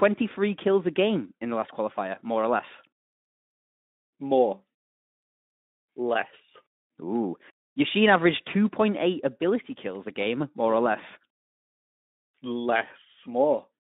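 No faults in this speech: it is Speex-coded throughout with a 200 Hz to 3.7 kHz line band, and only the light codec coloration expected at a setting near 15 kbps.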